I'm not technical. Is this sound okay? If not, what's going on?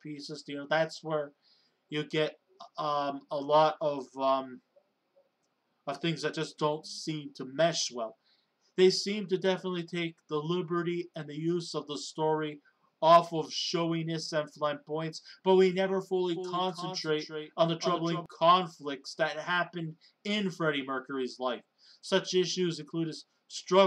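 No. From 16.36 to 18.26 seconds there is a doubled audio track. A second, somewhat quieter copy of the sound plays about a third of a second behind. It starts and stops abruptly. It is likely a second, slower recording path or a misaligned edit.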